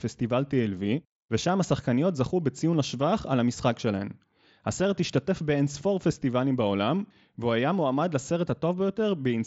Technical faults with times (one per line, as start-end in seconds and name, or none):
none